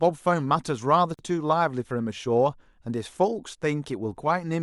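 A gap at a join of encoded pieces opens in this speech clip at 1.14 s to 1.19 s, a silence of about 47 ms with smeared edges. Separately encoded segments were joined untrimmed, leaving encoder start delay and final-frame padding in place before the sound resumes.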